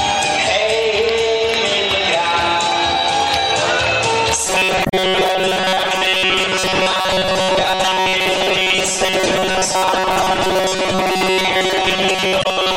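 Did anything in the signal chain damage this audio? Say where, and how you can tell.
Yes. From 4.47 s to the end, the sound turns into a rigid, metallic buzz at a fixed 188 Hz. That buzz follows the original only roughly. Roughly 70% of the material there seems to be repeated rather than new. This is robotic sound from repeated short buffers, likely at the driver or buffer stage. Audio arrives too seldom, so the last short block is replayed. A 188 Hz rate fits a block of about 5.3 ms.

There are also three brief disturbances, at 4.82 to 4.94 s, 9.93 to 9.96 s and 12.39 to 12.46 s. Each is a sudden break in the flow. They point to damaged data in a compressed stream, at the codec or storage stage. Some bytes of the encoded file were wrong. The decoder misread or dropped those frames and lost sync. It then hunted for the next frame header and resumed from there.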